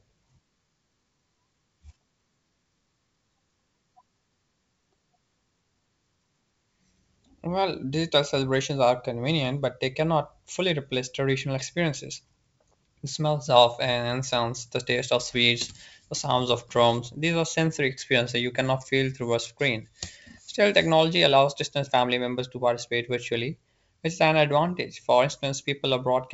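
No technical faults can be heard in the recording. The speech has the sound of G.722 wideband telephone coding, with nothing above about 7.7 kHz and at most a faint trace of the coding, which fits the full 64 kbit/s mode.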